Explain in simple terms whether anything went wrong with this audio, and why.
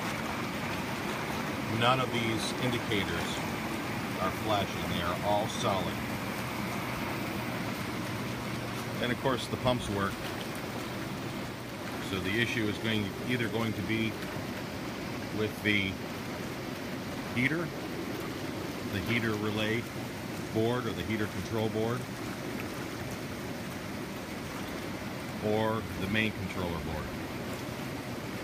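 Nothing went wrong with this audio, so there is no fault to explain.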